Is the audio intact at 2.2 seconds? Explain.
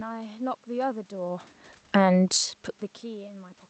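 No. At 2.2 s the automatic gain control is in the middle of two overlapping corrections.

Automatic gain falling runs from 1.8 to 2.29 s. The control judged the input too loud, or its background noise too strong for its gain, and eased its gain down by about 3 dB over roughly half a second. The sound sinks in level across that span, and the room background drops with it, so the quieting is not a natural fade of the speech alone.

Automatic gain rising starts at 2.2 s and lasts until 3.32 s. The input had fallen by about 24 dB. The control then reversed direction and slowly pushed its gain back up by about 3 dB. Over that second or so, speech and background swell together, and the noise floor audibly lifts along with the speech.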